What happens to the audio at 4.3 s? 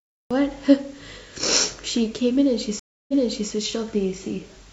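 Nothing goes wrong at 4.3 s; the speech continues cleanly through that moment with no audible fault.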